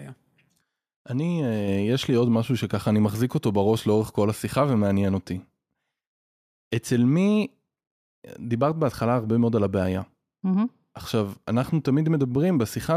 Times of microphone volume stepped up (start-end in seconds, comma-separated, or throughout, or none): 1.68